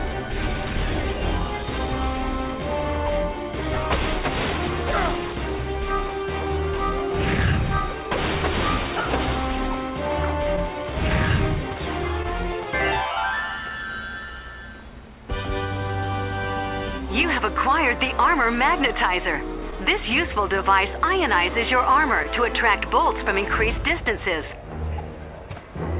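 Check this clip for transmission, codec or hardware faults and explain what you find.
Two related timing faults run through the clip, with a cluster of small dropouts near the end. The call-path band limit, with nothing above 4 kHz, is consistent with G.711 A-law at 64 kbps.

Clock drift between sender and receiver affects the whole clip. The sender's clock runs about 1% slow relative to the receiver's. The receiver's jitter buffer keeps draining, so it has to make up time. You hear this as a faintly uneven pace rather than any single defect.

Repeated timing corrections run from 0.09 s to 24.5 s. To compensate for the slow sender, the receiver stretches playback to roughly 99% speed, adding about a fifth of a second in total. These insertions are small and irregularly spaced, and they come through as slight hiccups and a subtly unsteady tempo.

Scattered short gaps occur between 17.22 s and 22.26 s. 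Around seven packets arrived late or went missing. The receiver bridged each hole by extending the preceding sound, covering about 70 ms in all, and the longest fill was around 15 ms. The result is brief ticks or smears, with the audio staying largely intact.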